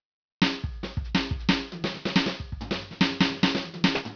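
Aliasing runs through the whole music clip. Sound above 5.5 kHz folds back as gritty, wrong tones. That fits an unfiltered drop to 11 kHz.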